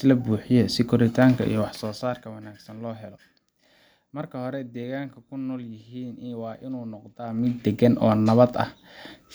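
Zipper noise runs from 7.22 to 7.64 s, where the speech level changes by roughly 20 dB in stepped increments of about 1 dB instead of a continuous ramp. Each jump in gain is applied abruptly, so every step leaves a tiny click in the waveform. Arriving at around 40 steps per second, these clicks merge into a fine ticking, zipping texture laid over the speech for as long as the level is moving.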